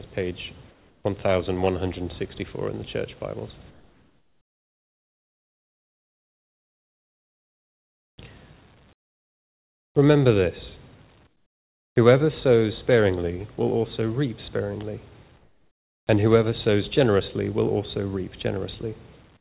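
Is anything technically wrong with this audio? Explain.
Yes. In the quiet gaps at 0.71–1.04 s, 3.71–8.18 s, 8.93–9.95 s, 11.27–11.96 s and 15.38–16.07 s, the real background, already about 38 dB below the loudest sound, gives way to a flat, featureless hiss that drops by about 4, 12, 32, 21 and 10 dB respectively, then snaps back when sound resumes. This is likely comfort noise in place of the background: the sender's voice detector paused transmission and the receiver synthesised shaped noise to fill each gap. Throughout, nothing reaches above 4 kHz, which fits a G.711 A-law call path.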